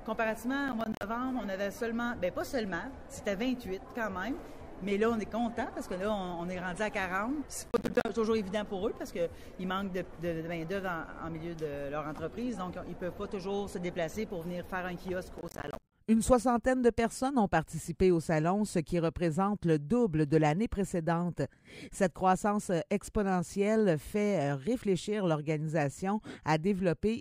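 The processor falls behind on its audio buffers three times, at 0.68–1.03 s, 7.68–8.09 s and 15.38–15.92 s. Each missed deadline leaves a hard-edged silent gap, which fits buffers of around 10 ms. Each burst of processor overload crackle tears grittily across the sound.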